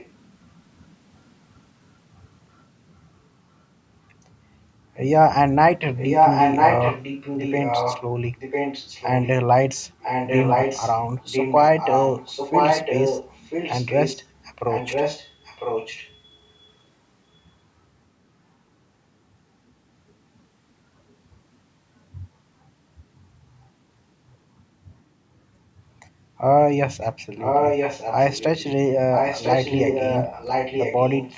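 A copy of the speech trailing about one second behind is faint at 0.0–0.11 s, as loud as the speech at 5.96–9.3 s, slightly quieter at 10.02–16.73 s, barely audible at 23.15–23.28 s, and back from 27.0 s to the end. This is likely an echo leak: a loudspeaker's sound reached the microphone and the echo canceller let it through.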